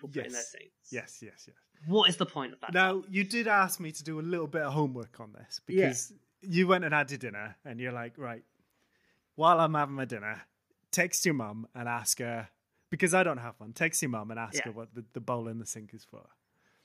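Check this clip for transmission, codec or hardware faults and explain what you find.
Nothing in the speech signal points to a transmission, codec or hardware problem: level, continuity and bandwidth hold steady with no audible disturbance at any point.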